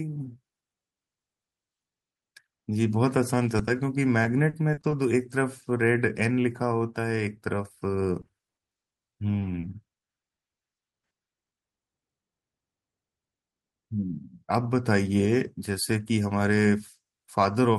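Around 3.57 to 3.61 s and again at 3.65 to 3.69 s there's a pair of short concealed packet losses. Each time about 20 ms of the speech didn't arrive in time, so the decoder stretched the last bit of sound to cover the hole and then blended back into the real signal. You hear it as a quick little smear or wobble, two in close succession.

Then it gets worse: repeated packet loss (robotic sound) from 4.23 to 4.93 s, 8.21 to 10.39 s and 10.79 to 11.53 s. Holes keep turning up one after another, each patched by continuing the previous sound before the next one hits. That gives a choppy, robotic texture with bits of speech missing. The first stretch loses about 140 ms in total, with the longest hole around 40 ms. The long middle stretch loses about 300 ms, with holes up to 60 ms. The last stretch is the roughest: about 240 ms concealed, roughly a third of that span, with one hole around 80 ms.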